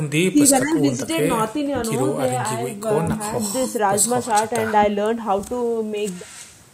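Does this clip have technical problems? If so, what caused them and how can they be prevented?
No, nothing technical stands out in this speech clip, so there is no cause to trace and nothing to prevent.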